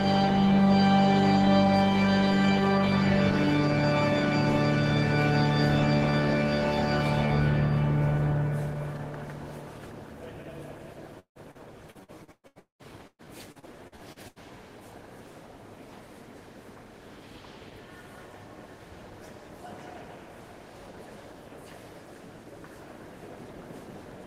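Between 11.19 and 14.39 s the stream suffers repeated packet loss (robotic sound): packets go missing or arrive too late over and over, more than a dozen times, with the longest hole lasting about 200 ms. The receiver covers each dropout by stretching the last sound it had, so roughly a third of the stretch is concealment, about 1.1 s in all. The audio turns choppy, stuttering with pieces missing.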